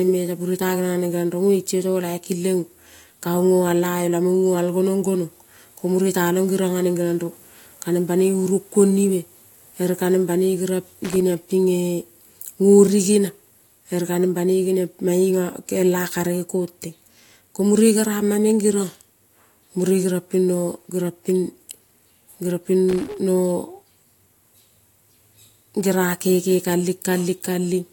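At 11.04 to 11.21 s and again at 22.89 to 23.18 s, the speech is broken by loose connector crackle: short, irregular bursts of scratching as a worn contact makes and breaks, chopping the signal and popping on any DC present. These bursts are ragged, and they last about 0.17 and 0.29 s.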